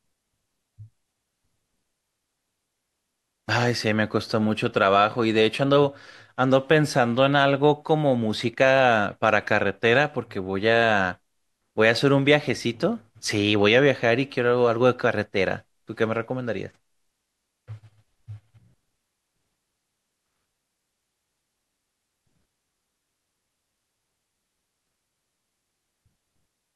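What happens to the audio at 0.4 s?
Nothing goes wrong at 0.4 s; the speech passes through that moment intact, with no dropout, click or other fault.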